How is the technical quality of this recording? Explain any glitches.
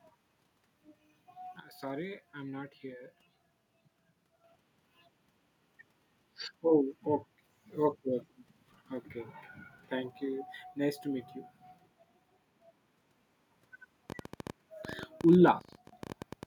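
The recording has clear technical faults: two sudden level drops and a burst of clicks near the end.

Sudden gain jump, from 1.60 to 4.44 s and again from 15.59 to 15.93 s: the level falls instantly by about 10 dB, then about 13 dB. The likely cause is a gain change applied without a ramp. Unlike a fade, the background noise steps down at the same instant as the speech.

Train of clicks, from 14.10 to 16.44 s: about 30 similar clicks arrive at roughly 13.7 per second, irregularly spaced and peaking about 5 dB above the speech, likely from electrical interference. Their matching shape separates them from random crackle.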